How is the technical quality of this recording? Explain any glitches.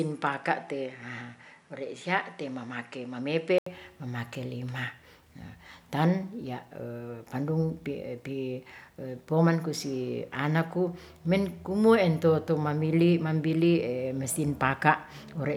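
The first few seconds of this speech recording sound dull, then clear up abruptly. From 0 to 3.66 s nothing reaches above 11 kHz, with faint background noise about 50 dB down and no real level change. An 80 ms gap marks the change. The likely cause is an input switched to a poorer device, a narrower-band microphone, before recording moved to a better one.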